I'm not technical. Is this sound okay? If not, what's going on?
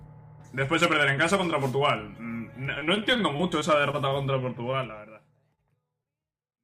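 No. From 2.79 to 4.13 s the sound turns choppy and robotic, with bits missing. This is repeated packet loss: about ten small chunks never arrived, and each gap was patched over.

From 4.71 to 4.75 s, during the gentle fade-out that starts around 4.5 s, a sound is held a moment too long. That's a short stall from a late packet: playback stretched the last bit while waiting.

Around 5.55 to 5.59 s and 6.03 to 6.07 s there are brief smears or wobbles. Each is a short concealed packet loss, where a tiny lost piece was filled in with a guess.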